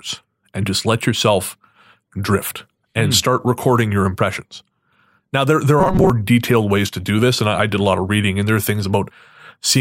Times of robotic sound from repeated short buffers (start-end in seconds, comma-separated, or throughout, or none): 5.80-6.10